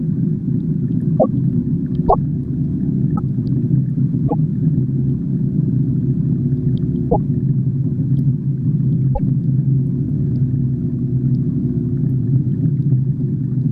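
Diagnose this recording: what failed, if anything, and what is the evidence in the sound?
The codec stage failed: a short glitch interrupts the audio six times, at 1.19–1.26, 2.08–2.15, 3.15–3.19, 4.27–4.34, 7.09–7.16 and 9.13–9.20 s. Each lasts about 70 ms (44 ms at 3.15 s), two to three 26.1 ms MP3 frames. The sound jumps ahead at each spot. A spectrogram shows a brief vertical smear breaking the texture, and the waveform a sudden discontinuity. This is likely a broken MP3 bit reservoir. Frames were dropped, so the following frames decoded from borrowed bytes belonging to other frames.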